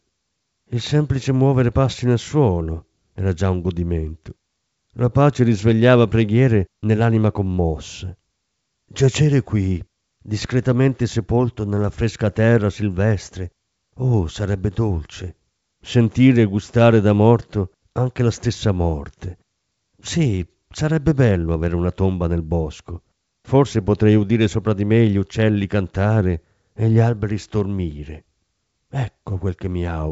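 No technical faults can be heard in the speech, which carries the wideband sound of G.722 telephone coding at 64 kbit/s, reaching up to about 7.7 kHz with nothing above that.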